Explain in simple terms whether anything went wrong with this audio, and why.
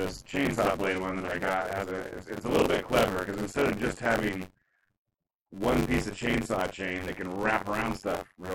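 Overdone noise removal runs from start to finish. A cleanup tool set too aggressively switches off slices of sound it mistakes for hiss, taking softer parts of the voice with them. The background drops and breaks up into twinkling, warbling specks.

Buffer tearing is also present throughout, as a steady robotic buzz around 94 Hz, which fits a 512-sample buffer. The program filling the audio buffer and the hardware reading it have drifted out of step. Roughly a third of each chunk replays sound from about 40 ms earlier. The hard joins on both sides of that stale piece cause the buzz, and it is heard only while someone is speaking.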